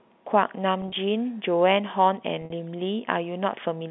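At 0.82 to 0.92 s the speech briefly takes on a held, buzzy quality, and at 2.42 to 2.52 s a longer stretch fades toward silence before returning. This is packet loss with pitch repetition: the receiver replays the last pitch period to cover lost packets, 60 and 70 ms scattered over about 100 ms, heard through the narrow telephone band of G.711.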